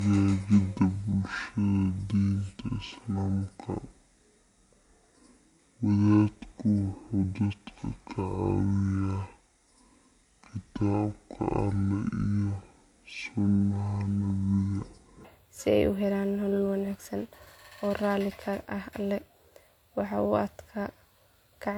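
From the start to 15.25 s, the section at the wrong speed is most likely the result of playback running against the wrong clock, at half the rate at which it was recorded. Speed and pitch drop together, so the speech comes out drawn-out and sluggish, with the voice sitting roughly ten semitones lower and sounding heavy and dragged. At 15.25 s the rate snaps back and the remainder plays at its natural pace and pitch.

Across the whole clip there is transcoding between lossy codecs, likely one older codec feeding a second, with the smeary, swirling texture of something like WMA at around 96 kbit/s layered under the synthetic, metallic top end typical of HE-AAC near 48 kbit/s. The second encoder spends effort re-coding the first one's artefacts, so both sets are audible at once, and nothing survives above 20.4 kHz.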